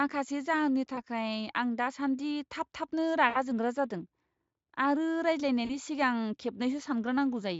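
At 0.95–1.02 s, 3.29–3.38 s and 5.65–5.78 s, VoIP packet loss is concealed by the speech codec, covering gaps of 20, 60 and 40 ms. The decoder repeats its last pitch and filter with falling gain, stretching the sound into a buzzy tone or coloured noise that fades. Spectrograms show frozen, smeared harmonics, and the waveform shows a repeating, shrinking envelope.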